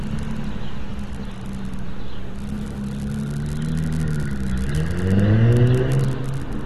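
AAC compression damage runs through the whole clip, from start to finish. Nothing is heard above 12.4 kHz, and the texture fits an AAC-LC encode at a low bitrate, around 40 kbps, which is the likely cause. Short of bits, the encoder drops the top band and quantises the remaining spectrum coarsely, leaving gaps. The sound is plainly dull and smeared, with a warbling, fizzy edge on sustained and hissy sounds.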